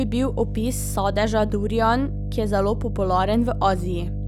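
A steady low drone sits under the speech from start to finish, close in level to the talking itself. It is mains hum at 50 Hz, with some low harmonics, where a ground loop or a nearby transformer has coupled the power line into the signal path.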